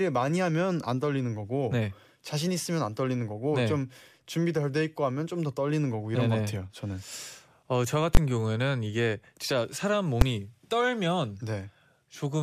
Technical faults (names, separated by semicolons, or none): invalid numbers at full scale